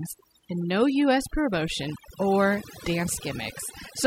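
Speech with overdone noise removal throughout: the noise reduction was set too aggressively, gating frequency bands near its noise estimate, leaving speech over near-silence with twinkling specks.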